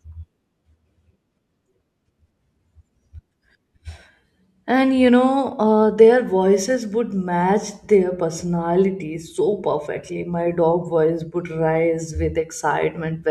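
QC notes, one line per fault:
No faults found on the speech track; nothing to log.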